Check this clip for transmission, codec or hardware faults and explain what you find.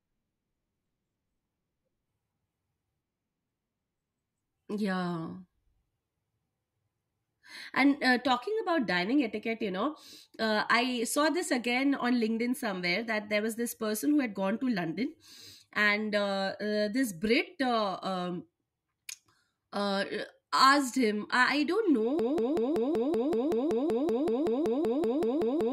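One transmission fault is present in this speech clip: a broken-record loop starting at 22.19 s, just after "I I don't know", and running to the end. The player or stream likely stalled and kept re-sending the last buffered fragment, here about 190 ms long. That slice repeats exactly, back to back, 19 times, producing a rapid stutter, and the speech that should have followed is lost.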